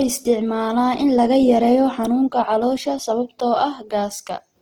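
Opus compression damage is plainly audible throughout. The speech sounds rough, grainy and noisy, with little swirl. The likely cause is Opus music mode starved of bits, consistent with about 16 kbps. Thin bands get filled with noise. Content still reaches 20.1 kHz.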